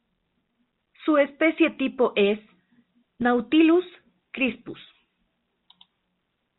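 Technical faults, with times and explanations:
Nothing here counts as a fault: the speech simply carries the narrow, phone-line character of G.711 telephone coding, with nothing getting through above 4 kHz.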